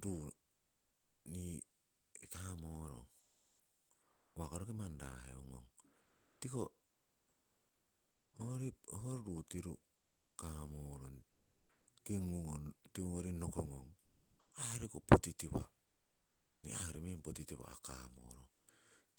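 Speech, with what is likely discontinuous transmission in an Opus-style codec causing comfort noise in place of the background: the real room tone gives way to steady, featureless hiss, up to about 5 dB quieter, at 1.87–2.11, 3.19–4.33, 6.01–8.29, 9.97–10.33 s (just after "ruu tiru"), 11.29–11.83, 15.85–16.63 and 18.55–18.67 s. Sound dropped by the voice detector at 13.99–14.47 s likely means about 230 ms of sound is replaced by comfort noise.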